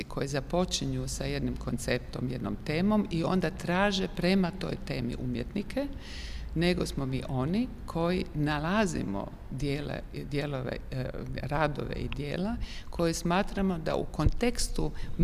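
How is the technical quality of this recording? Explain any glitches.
One glitch stands out. At 4.15 s there is a bit error spike. A flipped bit in memory or on a digital link throws a few consecutive samples off by a power of two. They peak near about -38 dBFS and snap straight back. The result is a single sharp tick, broadband and unrelated to the surrounding sound.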